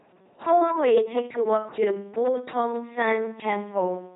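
Speech clip, heavily damaged by the LPC-10 vocoder throughout. It sounds buzzy and robotic, with nothing above 3.8 kHz, which fits a 2.4 kbit/s LPC-10 coder. Periodic USB or driver dropouts cause regular ticks every 0.099 s from 0.10 s to 4.06 s, about forty in all. Each skips roughly a millisecond of audio without filling the gap, likely because a background task is blocking the bus.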